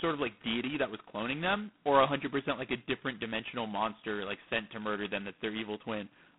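A harsh, rasping hiss rides on the speech throughout, swelling and fading with its level, and the sound is thin and boxed into a telephone band of roughly 150 Hz to 3.5 kHz, with nothing above 3.9 kHz. This is G.726 ADPCM coding, and damage this heavy fits its lowest 16 kbit/s mode.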